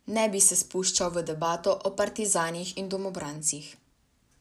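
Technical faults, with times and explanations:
Nothing stood out as a technical problem on listening to this speech recording.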